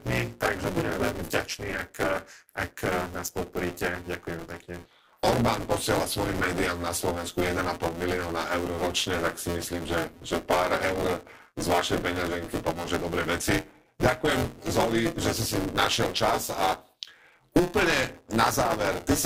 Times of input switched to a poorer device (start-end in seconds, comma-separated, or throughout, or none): none